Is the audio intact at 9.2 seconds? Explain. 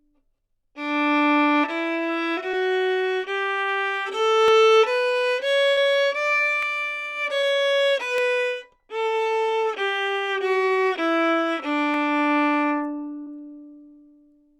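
Yes, the sound at 9.2 seconds plays through intact, with no dropout, click, distortion or other fault at that point.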